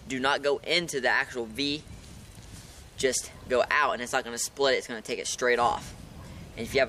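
Nothing here calls for a fix: the audio runs along steadily and nothing technical gets in its way.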